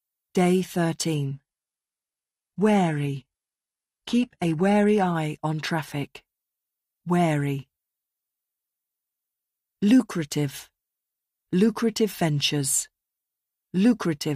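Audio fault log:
1.15–5.15 s: adaptive stream at a lower bitrate. The speech suddenly turns thin and synthetic, with nothing above 11.8 kHz, then snaps back just before "on traffic". There is no gap. The sound fits a switch from 96 kbit/s AAC to 16 kbit/s HE-AAC.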